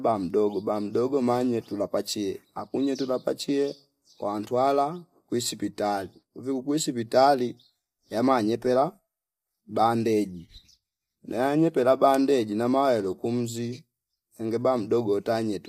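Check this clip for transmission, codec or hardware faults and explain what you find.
There's one codec fault, and it runs the whole way through. Low-delay AAC compression is the likely cause: its short frames resolve pitch harmonics poorly, so the speech comes out plainly rough and grainy, which fits AAC-ELD at around 32 kbps.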